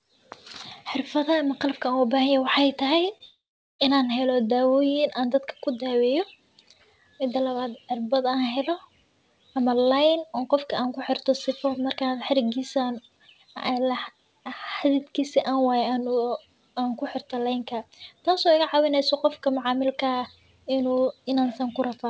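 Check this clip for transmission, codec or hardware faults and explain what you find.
Two faults sit back to back in this speech clip, which comes through a call codec that leaves nothing above 8 kHz, consistent with G.722.

Short concealed packet loss, 3.18 to 3.22 s: about 20 ms never arrived, so the decoder stretched the previous sound. It is heard as a brief smear and appears on the spectrogram as a smoothed stretch.

Long network dropout, 3.24 to 3.81 s: the sound turns into a fading synthetic buzz or hiss and then about 0.42 s of silence, likely from lost packets. The waveform shows a decaying tail, then a flat gap before the speech resumes.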